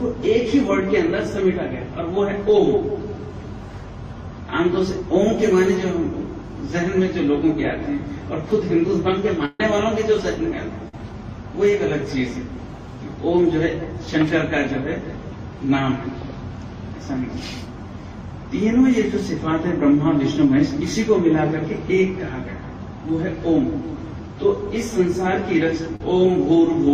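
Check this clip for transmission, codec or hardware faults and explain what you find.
Three transmission faults are audible, all from packet loss on the network path: two bursts of packet loss and one short concealed packet loss.

Burst of packet loss, at 9.45 to 9.60 s and 10.88 to 10.94 s. Packets arrived too late or not at all, so the receiver extended the last sound and lowered it across the gap. Depending on what was playing, this is a held buzz or a fading hiss. About 140 ms is filled and 140 ms lost in the first event, and about 46 ms filled with 40 ms lost in the second. After each, the audio jumps ahead. On a spectrogram, each gap shows a frozen, fading band that ends in a hard edge where real content returns. The waveform shows a decaying, repetitive stretch.

Short concealed packet loss, at 25.96 to 26.01 s. About 40 ms never reached the decoder in time and was covered by 38 ms of synthesized continuation, built from the previous pitch or from shaped noise, then crossfaded back. 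It is heard as a brief smear or wobble. On a spectrogram, it is a short blurred patch where detail flattens. The waveform shows a small section of repeated cycles or noise before the true signal resumes.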